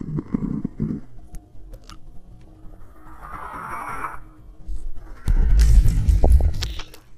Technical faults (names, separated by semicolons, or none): DAB burbling